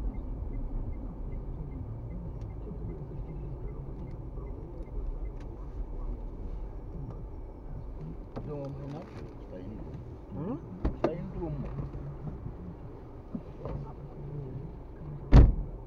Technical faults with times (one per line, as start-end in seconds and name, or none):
none